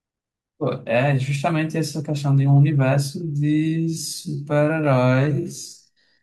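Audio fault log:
3.23–6.23 s, time-stretched section: software likely slowed the audio to about 0.57x while holding pitch by repeating short pieces, so the speech turns abruptly slower.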